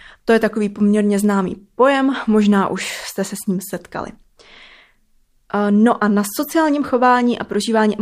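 No technical faults can be heard in this speech recording. There is nothing in the audio that needs to be flagged.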